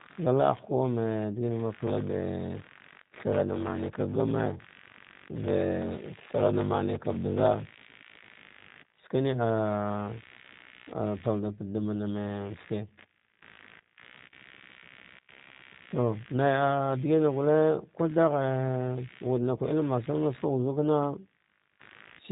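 A faint buzzing chirp runs beneath the speech from start to finish, pulsing at around 70 times a second and sitting roughly 25 dB below the talker. This is computer activity noise: processor, graphics or mouse load shifting the shared ground of the audio circuit.

Also present the whole way through, the speech sounds narrow, rough and somewhat synthetic, with nothing above about 3.8 kHz. This is G.729 codec damage. The codec rebuilds each 10 ms frame from a vocal tract filter, pitch predictor and a few pulses, which fits an 8 kbit/s encoding.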